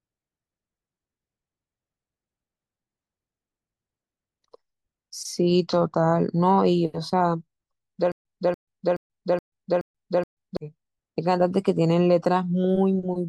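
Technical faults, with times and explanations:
8.12 to 10.57 s: stutter with silent gaps. The speech stops moving forward. One fragment of 289 ms plays, then drops into digital silence for 135 ms. The pair repeats six times at an even 423 ms pace. The cause is likely a stalled player or stream that replays its last buffered fragment on each retry and then runs dry. The speech that belonged in that span never plays.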